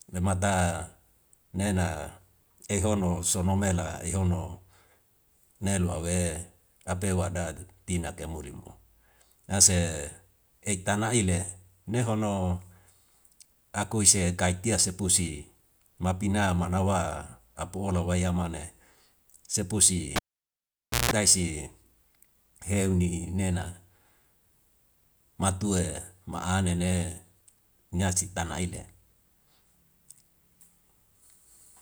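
Speech with a cable pulled and plugged in from 20.16 to 21.11 s: a pop, about 0.9 s of near silence, then 0.16 s of 60 Hz buzz, visible as flat waveform, spikes and horizontal mains harmonic lines.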